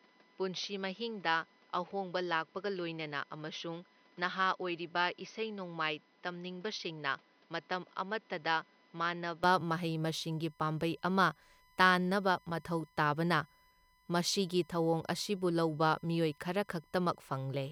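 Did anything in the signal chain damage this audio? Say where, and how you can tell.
Yes. A USB whine sits under the whole clip, a steady 1 kHz tone roughly 40 dB below the signal. This is an analogue wiring fault: the bus's 1 ms frame current leaks through shared power or ground into the input, giving that fixed pitch.

From 0 to 9.44 s the speech is duller and a few dB quieter, with nothing above 6.2 kHz and a noise floor roughly 30 dB down. It opens up abruptly with no gap. The likely cause is the input switched to a poorer device at the driver level, then back.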